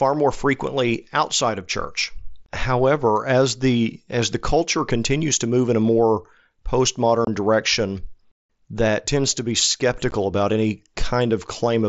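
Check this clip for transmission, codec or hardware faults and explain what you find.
Two brief dropouts point to the Bluetooth headset link, which sounds like a wideband mSBC connection.

Unconcealed Bluetooth headset packet loss, at 7.25 to 7.27 s and again at 10.11 s, just after "that tends to be" and before "about any". Voice packets between headset and phone went missing and nothing filled the gaps, so silence or an idle pattern replaced them. The first hole lasts about 22.5 ms, which fits three 7.5 ms frames, and the second about 15 ms, which fits two. Each sounds like a sharp, clipped gap in the speech.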